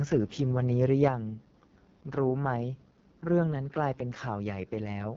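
AMR wideband (HD Voice) codec damage runs throughout: the speech is rough and raspy, with nothing above 7.5 kHz, which fits its lowest 6.6 kbit/s mode. Microphone overload from 0.82 to 1.08 s gives those syllables a harsh, crackling edge, likely peaks about 3 dB past the converter's limit, with around one percent of samples flattened. Microphone volume stepped down at 1.08 s: voice and background drop together by about 5 dB, likely the call software cutting input gain after that distorted peak.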